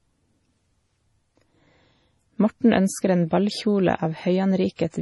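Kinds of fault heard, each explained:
MP3 compression: The heavy, watery swirl through the whole speech track is most likely an MP3 encoder short on bits, and the damage fits a low rate of around 32 kbps. With that little to spend, the encoder drops quieter frequency detail, and those bits flicker in and out between frames, giving the speech a warbly, underwater texture. It also chops the treble flat, so nothing is left above about 11.5 kHz.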